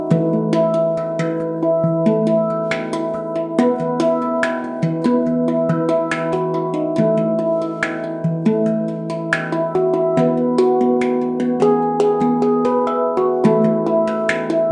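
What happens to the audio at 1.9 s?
Nothing goes wrong at 1.9 s; the audio plays through that moment intact, with no dropout, click or distortion.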